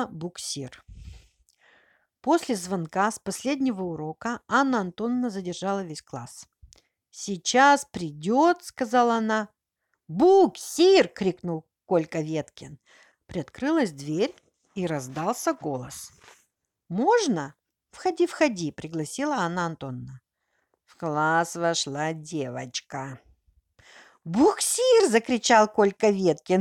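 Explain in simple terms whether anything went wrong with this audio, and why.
Nothing went wrong here: the speech recording comes through intact, with no technical faults anywhere in the signal.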